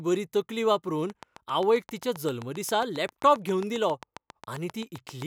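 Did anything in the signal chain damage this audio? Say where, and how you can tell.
Yes. A train of clicks runs from 1.10 s to 5.23 s: about thirty near-identical pulses at a steady 7.5 per second, peaking around 10 dB above the speech and audible in pauses too. That points to interference on the analogue wiring or interface, likely, not dropouts, which would leave gaps rather than add ticks.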